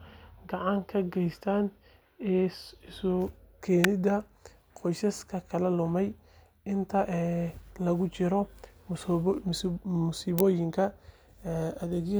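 Speech with two sharp snaps, at 3.84 s and 10.39 s, peaking around -5 dBFS. They sound like an electrical switching spike, likely from a nearby switch arcing.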